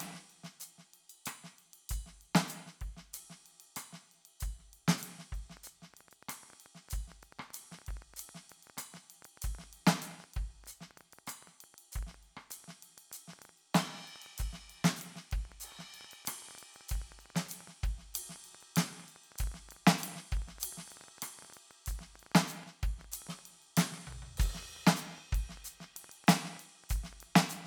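From 5.57 s to 27.58 s a train of clicks, some two hundred at an uneven 8.7 per second and peaking about as loud as the music, ticks over the sound, likely from electrical interference or a faulty connection. A spectrogram shows thin vertical broadband lines; the waveform shows sharp spikes.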